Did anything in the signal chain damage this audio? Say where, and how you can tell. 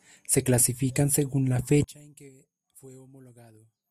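Yes. From 1.84 s to the end, the speech drops by about 26 dB and turns faint, the sound of one channel inverted and then summed to mono. The likely cause is a polarity-swapped lead in the analogue wiring, so everything shared by both channels cancels.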